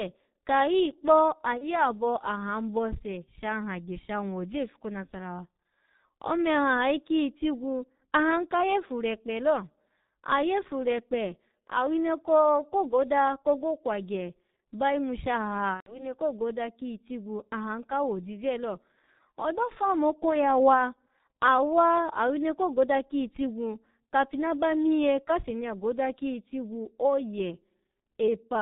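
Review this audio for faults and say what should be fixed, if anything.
The whole recording carries heavy G.723.1 codec damage. Nothing reaches above 4 kHz, consonants smear together, and the voice has a hoarse, rough texture because the coder's voice model only updates every 30 ms. That points to G.723.1 at its 6.3 kbit/s rate. A plain low-pass filter would muffle the sound without the hoarseness, and a music codec would leave swirly artefacts rather than this buzzy vocal grain. Prevent it by capturing or transmitting with a wideband codec at a higher bitrate.

VoIP packet loss concealed by the speech codec shows up twice, at 1.59–1.77 s and at 15.74–16.16 s. Instead of an immediate silent gap, the decoder keeps repeating its last pitch and filter, so the speech smears into a fading tone or noise, and in the second event it goes silent from the third lost frame on. The sound stays weak and distorted after the loss ends, because each frame rebuilds from the previous one. 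That lingering recovery is what separates it from a simple dropout. The first event fits a single lost 30 ms frame, and the second fits about 120 ms lost. Prevent it with jitter buffering, forward error correction or a more reliable network path.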